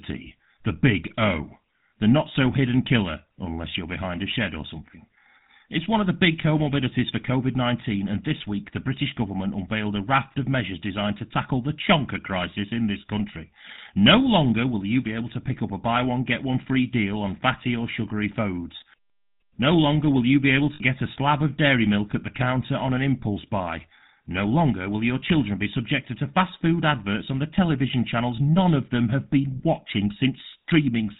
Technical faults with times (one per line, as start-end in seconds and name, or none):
0.00-31.19 GSM full-rate codec
20.74-20.81 lost GSM frames